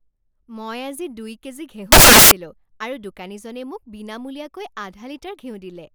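From 1.92 to 2.31 s the speech is replaced by loud, harsh broadband noise. These are samples built from the wrong bytes: the reader misassembled each sample's bytes, so the rapidly changing low bits dominate every value.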